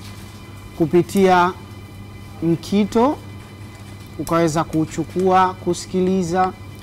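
Hard clipping turns up four times: 0.82 to 1.45 s with about 7 dB of overdrive, 2.97 to 3.06 s at about 3 dB, 4.32 to 4.61 s at about 4 dB, and 5.27 to 5.46 s at about 5 dB. Peaks overran a stage and got flattened, adding upper-spectrum distortion.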